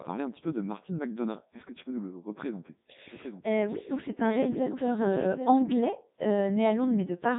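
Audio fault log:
throughout, Codec 2 vocoder: the speech is robotic and buzzy, with heavy damage and nothing above 3.8 kHz. The waveform isn't kept; only pitch, voicing, energy and a spectral envelope are sent, and the decoder rebuilds the voice from sine waves, which fits Codec 2's 3.2 kbit/s mode.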